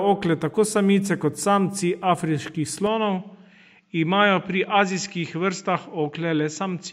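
At 2.87 s the speech abruptly turns duller and a few decibels quieter, and stays that way to the end. Nothing above about 7.6 kHz remains, so the airy top end disappears, and a faint new background noise sits well beneath the speech. There is no gap at the change. This is most likely an input switched to a poorer device partway through the recording, a narrower-band microphone with its own level and noise floor.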